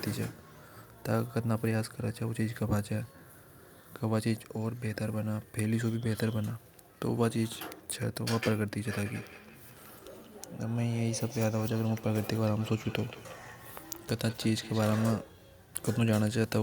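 From 9.16 s to 15.16 s the speech carries a feedback echo between two devices: a second device in the same room replays the call, its sound reaches this microphone again, and the local echo canceller cannot remove audio it did not play itself. Each word returns roughly a fifth of a second later, thinner and ringing, peaking about 18 dB below the speech. A spectrogram shows faint, time-shifted copies of each harmonic pattern trailing the originals at that spacing.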